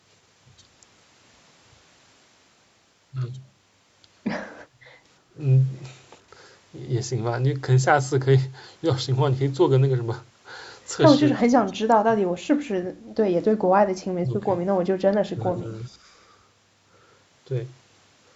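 At 4.68 to 4.80 s the background is gated by the echo canceller: with the loudspeaker active, it pulls the microphone down by about 7 dB, so the room tone dips briefly and returns.

Three later cuts, at 11.92 to 12.07 s, 14.17 to 14.45 s and 15.32 to 15.68 s, are likely speech suppressed in double talk, where the canceller mistakes the near talker for echo. The voice itself dips, by roughly 30, 25 and 15 dB, in bursts of about 0.15 to 0.3 s.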